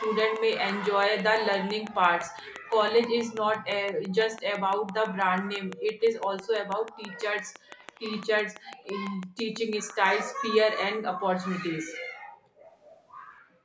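From about 0.04 s to 10.07 s there's a train of clicks, a steady tick roughly six times a second, around seventy in all, popping out well above the speech and audible in the pauses too. Regular spacing like that most likely points to nearby equipment interference or a faulty connection or power supply.

Echo leak turns up at 2.62 to 2.70 s, 7.14 to 7.19 s, 7.78 to 8.21 s, and 12.81 to 13.02 s. It's a faint copy of the speech trailing by 248 ms, which likely means the far end's echo canceller didn't fully scrub what its microphone heard from the loudspeaker.

The background gated by the echo canceller shows up at 6.85 to 6.96 s, 7.49 to 7.70 s, and 11.99 to 12.42 s. The room tone drops by about 35 to 37 dB while the canceller clamps down, then comes back.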